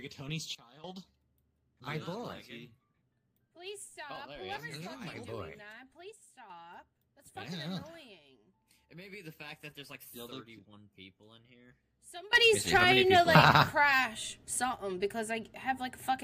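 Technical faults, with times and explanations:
0.55–0.84 s, 6.12–6.5 s and 12.33 s to the end: sudden gain jump. The level drops about 14 dB, then about 6 dB, then rises about 19 dB. Sound and background noise shift together, instantly. The likely cause is a gain setting applied without a ramp.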